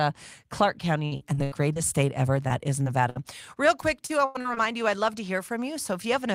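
Speech with repeated network dropouts. Repeated packet loss makes it choppy and robotic from 1.05 to 1.78 s, just before "state ever", and from 3.81 to 4.58 s, just before "you I'd love to". Each stretch has five gaps patched by continuing the last sound, and the longest gaps are 82 and 93 ms. Short concealed packet loss leaves brief smears at 2.48 to 2.51 s, right after "state ever", and at 2.83 to 2.88 s, where about 20 ms was filled in each time. A burst of packet loss at 3.10 to 3.17 s drops about 60 ms, heard as a fading hold before the sound resumes further on.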